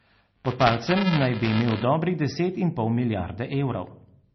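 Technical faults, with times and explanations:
throughout: MP3 compression. The likely cause is an encoder running very short of bits, a budget that fits a rate of roughly 27 kbps. With so little to spend, it cuts the treble outright, leaving nothing above about 5.9 kHz, and drops weak frequency lines that flicker in and out between frames. The speech therefore sounds dull and muffled, with a watery, swirling texture, smeared consonant onsets and metallic chirping on s sounds.
0.00–1.83 s: buffer tearing. The program filling the playback ring buffer and the hardware reading it have drifted so their positions cross inside each period. A small slice of every buffer, a few percent, replays audio about 7 ms old, hard-spliced on both sides. Those joins repeat at 375 Hz, which fits a 128-sample buffer, producing a robotic buzzy rattle riding on the speech that clears just before "dobrih deset in pol".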